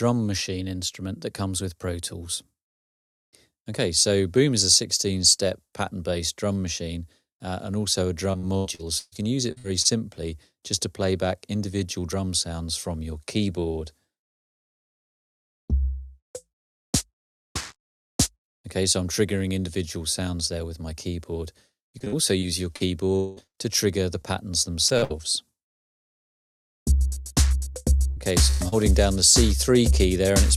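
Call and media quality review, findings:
Repeated packet loss (robotic sound), 8.31–9.87 s, 21.99–26.11 s, 27.73–28.74 s: choppy, metallic stretches from jitter buffer or network loss, with each hole patched by repeating prior audio. Worst at 8.31 s, with about 29% concealed and gaps up to 131 ms. Spectrogram shows smeared, repeated frames and broken harmonics.

Long network dropout, 23.16–23.39 s, inside the second loss burst: roughly 0.2 s of audio is replaced by a sustained, fading buzz or hiss with no silence before playback resumes, likely a brief network outage. Waveform shows a repetitive, fading concealment envelope, and the spectrogram shows a frozen spectral slice.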